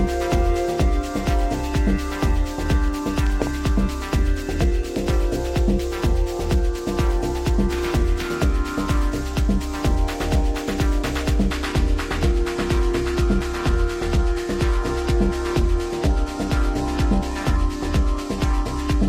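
At 1.74 to 1.92 s, a loud pop comes as two sharp clicks about 5 dB above the sound, and at 3.42 to 3.49 s another double pop peaks about 15 dB above it. The sound continues underneath both. Each is likely a voltage pulse from a plug, switch or driver glitch.

From 11.51 s to the end, an adaptive stream at a lower bitrate takes over without a gap. The treble abruptly disappears above 14.9 kHz, with more codec artefacts, which fits a switch to low-bitrate HE-AAC.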